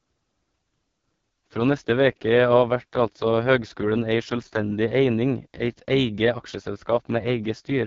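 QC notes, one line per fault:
Throughout, AMR wideband (HD Voice) codec: the speech went through AMR-WB at a very low rate, which fits the 6.6 kbit/s mode. The pulse-driven model is starved of bits, so the speech sounds heavily rough and raspy, with nothing above about 7.3 kHz.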